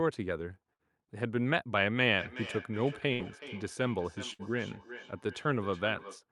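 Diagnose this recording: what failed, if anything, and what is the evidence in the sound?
Network stage: a burst of packet loss, three times. The gaps fall at 0.73 to 0.82 s, 3.13 to 3.22 s and 4.33 to 4.42 s. In each one the receiver's concealment stretches the last sound for about 60 ms, so it turns into a held buzz or a hiss as it fades down. Then the speech picks up again further along, with roughly 60 ms of speech skipped. Several packets in a row were lost or came too late to be played.

Call processing across two devices: feedback echo between two devices runs from 2.20 s to 6.24 s. The speech comes round again roughly every 0.4 s, and each pass sounds thinner and more ringing. At its loudest the echo sits about 14 dB below the direct speech. A second device in the same room is playing the call aloud, and this microphone picks it up again. The local echo canceller only removes its own device's playback, so this echo gets through.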